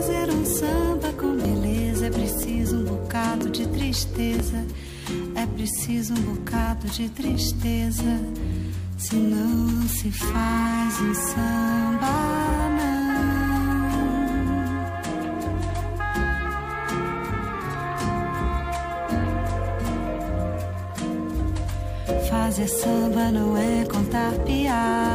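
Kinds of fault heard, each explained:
DECT cordless phone buzz: A thin, steady buzz runs under the whole clip, faint and well below the main sound but never stopping. Its 100 Hz repetition rate with a spray of harmonics gives it a harsh, papery edge. A DECT handset or base station nearby sends a short radio burst every 10 ms. Some stage of the audio circuit rectifies that radio energy, turning the burst rate into an audible tone.
overlap between stream segments: Brief clicks or tiny skips break the sound at 0.47, 1.45, 2.43, 3.41, 4.4 and 7.35 s, spaced just under a second apart, with a gap in the pattern after 4.4 s. The rhythm fits 1-second stream segments whose time stamps overlapped. The player trimmed the overlap even though that audio was not actually repeated. Each time, a few milliseconds up to about 17 ms of sound went missing, and the waveform jumped.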